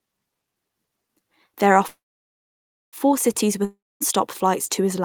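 A call audio freeze runs from 1.87 to 2.96 s in this speech. The last sound carries on briefly as a fading buzz, then about 0.96 s of near silence follows. The likely cause is packets held up in transit until the jitter buffer ran dry. When they arrive, the speech resumes exactly where it stopped, so nothing is lost, but everything after is pushed about 1.05 s later.

A long network dropout follows from 3.65 to 4.03 s, just before "flights to". The speech again gives way to a short fading buzz, leaving about 0.23 s of silence. This time roughly 0.36 s of audio likely never reached the receiver at all. When sound returns it jumps ahead, skipping the missing stretch rather than picking up where it left off.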